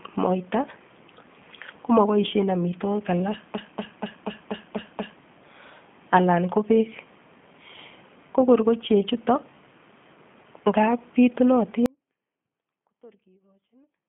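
Throughout, the speech carries G.729 codec damage: a 150 Hz to 3.4 kHz line band with nothing above 3.5 kHz, and a rough, synthetic grain that fits an 8 kbit/s G.729A coder, beyond plain band-limiting. At 11.86 s, an audio dropout to a faint residue cuts the speech abruptly, not as a fade, leaving only a faint trace far below normal level until the end, likely a lost input with the path still live.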